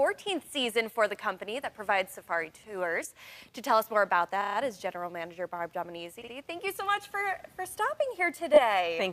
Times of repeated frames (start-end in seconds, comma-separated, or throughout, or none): 3.03-3.07, 4.41-4.57, 6.21-6.33, 8.53-8.60